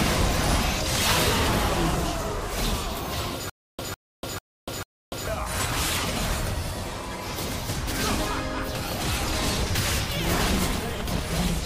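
Stutter with silent gaps, 3.50 to 5.27 s: a 153 ms burst replays four times with 291 ms silence between, likely a stalled stream retrying.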